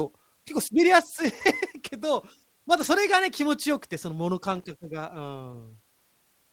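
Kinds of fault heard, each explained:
Lost packet rebuilt from error correction: dropped packets replaced by lower-bitrate backup copies, so no gap, just rougher, noisier stretches around 1.25–1.47 s, 2.77–2.87 s and 5.53 s.
Loose connector crackle: a dodgy contact making and breaking, giving an irregular burst of scratchy crackle from about 4.51 to 4.64 s.
Short concealed packet loss: about 20 ms never arrived, so the decoder stretched the preceding sound to bridge it, leaving a brief smear near 5.51–5.56 s.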